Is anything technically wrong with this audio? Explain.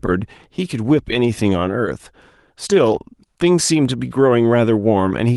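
No, nothing in this speech recording stood out as a technical problem on listening.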